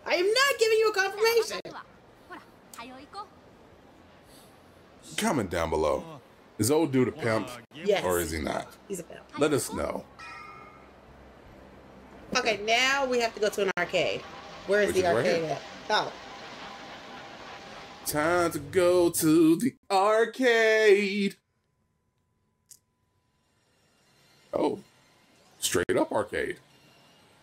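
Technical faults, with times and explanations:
1.60, 7.65, 13.71, 19.77 and 25.83 s: gap at a join of encoded pieces. The sound drops to silence for 47 ms, then 60 ms every six seconds, with smeared edges, and resumes where it stopped. Separately encoded pieces were joined untrimmed, keeping each encoder's start delay and final-frame padding.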